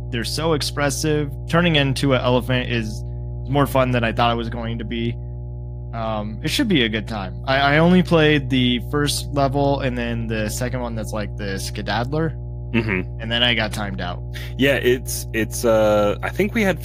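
From start to finish, a steady mains hum sits under the speech: a 60 Hz tone, with some low harmonics, at roughly 10 dB below the speech level, which makes it clearly audible as a constant drone. Power-line current is leaking into the signal path, most plausibly through a ground loop or a nearby transformer. On a spectrogram it shows as an unbroken horizontal line at 60 Hz; the waveform carries a visible low-frequency ripple even between phrases.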